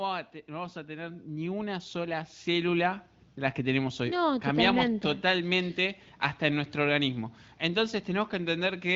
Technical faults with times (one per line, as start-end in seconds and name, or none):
0.46-4.07 automatic gain rising